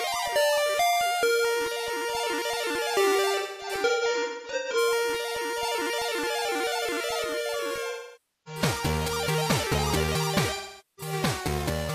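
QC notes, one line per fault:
3.38–4.77 s, 7.90–8.61 s, 10.55–11.13 s: AAC frame loss with concealment. In the first span, losses totalling about 0.81 s are scattered across 1.37 s, the longest run around a fifth of a second. The later spans lose about 0.55 s and 0.43 s. The decoder rebuilds missing frames from the last good spectrum, so the gaps sound smeared, noisy and phasey rather than silent, unlike a plain dropout or mute.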